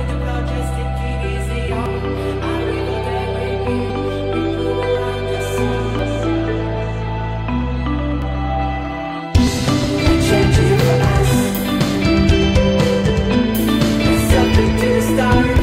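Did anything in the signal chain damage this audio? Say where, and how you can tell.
Yes. Dropped buffers (overrun) at 1.86, 3.90, 5.99, 8.22 and 9.47 s: jumps where the sound skips ahead roughly 50 to 150 ms without any gap, likely because the driver's buffers were overwritten before being read.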